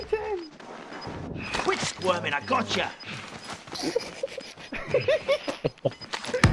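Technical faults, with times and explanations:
No technical faults can be heard anywhere in it.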